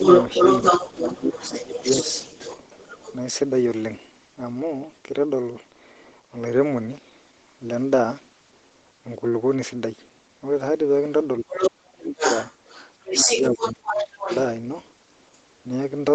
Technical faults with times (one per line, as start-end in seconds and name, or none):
0.00-3.14 other side's voice leaking through
0.95-1.27 speech suppressed in double talk
1.60-1.85 speech suppressed in double talk
11.40-12.24 speech suppressed in double talk
11.49-11.70 other side's voice leaking through
12.17-14.40 other side's voice leaking through
13.24-14.31 speech suppressed in double talk